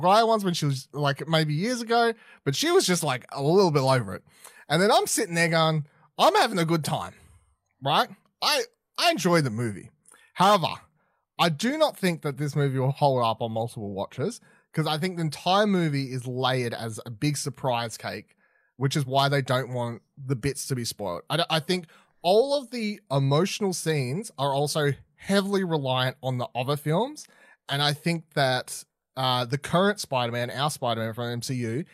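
No technical faults can be heard anywhere in this speech recording. There is nothing to place on a timeline and nothing to trace to a cause.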